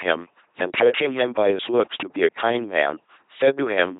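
From start to finish the speech has a gritty crackle that bursts out on its loudest moments, a brief harsh edge rather than a constant fuzz. This is hard clipping: the signal was driven about 6 dB beyond what one stage could pass, so its peaks were sliced flat. Only around one percent of the waveform reaches that ceiling, which is why the distortion comes and goes with the peaks, but each flattened top throws off high harmonics that read as crackle.

Also present throughout, the voice sounds buzzing and mechanical, like a robot, with no natural breathiness or warmth, and nothing at all above 3.8 kHz. This is the signature of an LPC-10 vocoder with heavy codec damage, consistent with a 2.4 kbit/s military speech channel. The codec models the voice as a simple vocal tract filter excited either by a pulse train or by noise, with nothing in between. The result is a flattened, synthetic tone, and any wrong voicing choice comes out as a stray buzz or hiss.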